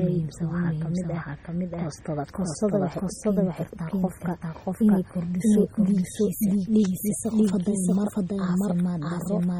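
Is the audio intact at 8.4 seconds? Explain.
No. A doubled audio track runs throughout, so it is present at 8.4 s. A second, equally loud copy of the speech trails by roughly 0.7 s, likely from a slower capture path. MP3 compression also damages the whole clip heavily. The sound is watery and swirly, with smeared attacks, which fits a low bitrate around 32 kbps. Nothing is present above 19.8 kHz.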